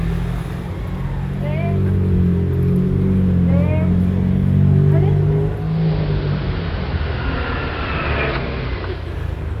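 A recording of sounds that shows digital radio blending to analogue from 5.55 to 9.19 s: a 0.38 s cross-fade into AM raises the level by about 1 dB and brings up hiss about 25 dB below the signal, which a simple filter change would not.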